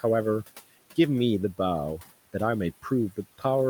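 A noise suppressor runs across the whole speech clip, estimating which frequency bands hold steady background and pulling them down frame by frame, by about 16 dB at its deepest. The room noise, sitting about 19 dB under the speech, is therefore not held at a constant level: it drops away in the gaps between words and swells back up beneath them as the suppressor eases off, giving the background a pumping, gated quality that follows the speech.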